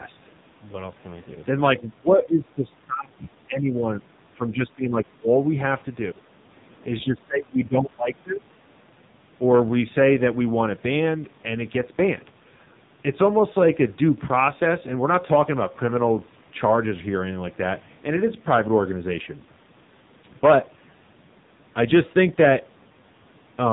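Throughout the clip, the speech carries heavy AMR narrowband mobile codec damage. Nothing above 3.8 kHz survives. A vocal-tract model driven by a few pulses per frame rebuilds the sound, so it comes out buzzy and synthetic. That fits roughly 5.9 kbps.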